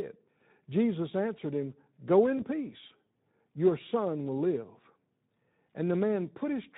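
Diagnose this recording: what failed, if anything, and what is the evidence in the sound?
At the codec stage, the speech was squeezed through the Speex codec at a low rate, which fits about 11 kbps. With too few bits to code the excitation, the speech sounds plainly hoarse and noisy for the whole clip.

At the network stage, one packet went missing, which fits a single lost 20 ms frame, and the speech decoder concealed the gap from 2.37 to 2.40 s. It extended the last pitch and filter at falling gain, so a brief fading smear replaces the speech there.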